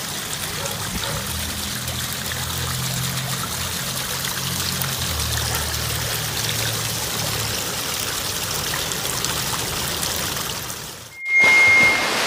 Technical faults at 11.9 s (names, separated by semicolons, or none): loudspeaker feedback squeal